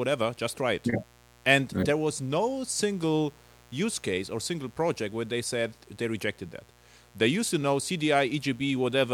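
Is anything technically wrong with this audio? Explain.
Yes. A mains buzz runs through the whole recording, sitting roughly 30 dB below the speech. It comes from sharp switching spikes, such as those from a dimmer or rectifier, or from a poorly shielded line, entering the signal twice per 60 Hz cycle. Those spikes carry harmonics up into the kilohertz range, so the buzz sounds steady and raspy. A plain hum would be a smooth, low tone near the fundamental, without that edgy top end.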